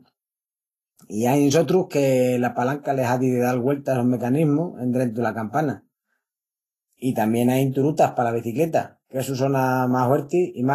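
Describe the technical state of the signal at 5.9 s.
Vorbis compression damage is present at 5.9 s, as it is across the whole clip. The speech sounds hissy and grainy, with roughened tones, smeared consonant onsets, and nothing above about 14.2 kHz. The likely cause is low-quality Vorbis encoding, which fits a bitrate in the region of 27 kbps. The codec keeps a smooth spectral outline but quantises the treble so coarsely that fine detail turns into noise of similar energy, and it lowers the cut-off to save bits.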